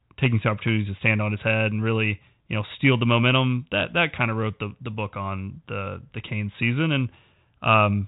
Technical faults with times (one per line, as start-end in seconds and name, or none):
none